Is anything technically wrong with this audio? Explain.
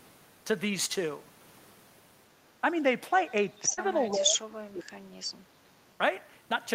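Yes, there are three kinds of fault in this speech clip.

Echo leak appears at 3.53 to 3.59 s, 4.03 to 4.11 s and 5.46 to 5.95 s, where a delayed copy of the speech comes back 402 ms after the original. The first and last are about 35 dB below the speech; the middle one is stronger, about 25 dB below. The likely cause is a loudspeaker on one end of the call whose sound reached that end's microphone and was not fully removed by the echo canceller, so the residue was transmitted back.

Short concealed packet loss occurs at 3.73 to 3.79 s. About 40 ms of audio failed to reach the decoder in time, and the receiver covered 38 ms of that gap by extending the preceding sound, following its pitch if it was voiced or substituting shaped noise if it was not, before crossfading back into real audio. The result is a brief smear in the speech.

Speech suppressed in double talk runs from 4.15 to 4.99 s, with the level dropping by as much as around 30 dB. 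The likely cause is an echo canceller on the loudspeaker side that could not distinguish its local talker from far-end sound playing through the speaker at the same time, so it attenuated both together, cutting into the speech it should have passed.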